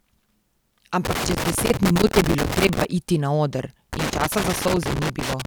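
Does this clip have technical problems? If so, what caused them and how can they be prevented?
Yes. A loose connector with a worn or dirty contact kept making and breaking, chopping the signal, heard as irregular crackle from 1.05 to 2.85 s and from 3.93 to 5.45 s. Cleaning or replacing connectors and securing cables prevents this.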